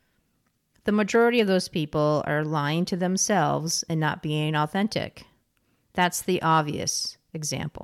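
Hard clipping shows up three times in this speech. First from 0.88 to 1.40 s, just before "of those people are", the peaks run about 1 dB past what the chain can pass and get sliced flat, giving a crackle. Then come two short bursts at 6.00 to 6.06 s and 6.51 to 6.60 s, pushed about 2 dB over, where the flattened tops throw off high harmonics and the peaks crackle briefly.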